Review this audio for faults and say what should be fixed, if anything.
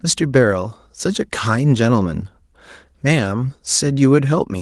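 Nothing stood out on listening to this speech, so there is nothing here that needs fixing.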